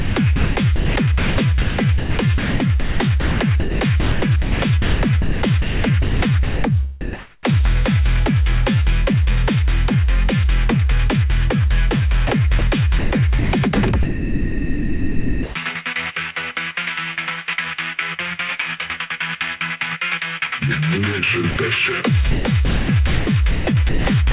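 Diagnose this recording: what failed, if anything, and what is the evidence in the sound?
Sound chopped by the voice detector, 0.0 to 7.45 s, 12.27 to 15.55 s and 22.31 to 24.32 s: the failure sits in call processing, most likely the sender's voice activity detection. In each span the sound repeatedly breaks off and is patched with comfort noise, about 3.8 s, 1.8 s and 0.9 s of it respectively.

Sound dropped by the voice detector, 21.51 to 21.57 s: also in call processing, and likely caused by the sender's detector misjudging a quiet stretch as background and stopping transmission. For 60 ms the sound is simply absent, replaced by steady comfort noise, and it returns as soon as the detector fires again. Throughout, the audio carries nothing above 4 kHz, which fits a narrowband call codec such as G.711 mu-law.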